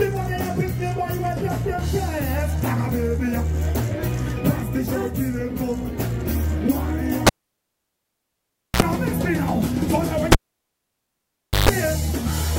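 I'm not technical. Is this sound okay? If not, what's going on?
No. There are two moments where a cable pulled and plugged in interrupts the sound, at 7.27 to 8.82 s and again at 10.32 to 11.69 s. Each starts with a pop, then the sound disappears for about 1.5 s the first time and 1.3 s the second. Just before it returns comes a short mains buzz: a 60 Hz hum lasting 58 ms the first time, and a longer 50 Hz hum of 138 ms the second. A second pop follows. That buzz and the pops at each end set it apart from a simple dropout, which would just go quiet.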